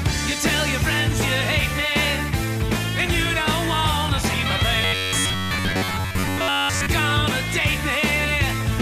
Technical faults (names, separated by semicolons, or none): robotic sound from repeated short buffers